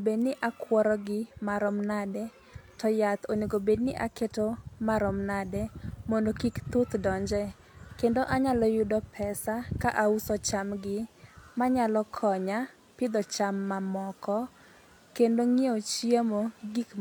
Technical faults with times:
none

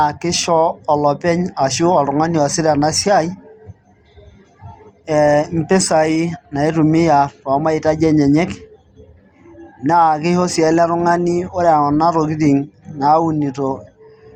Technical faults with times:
none

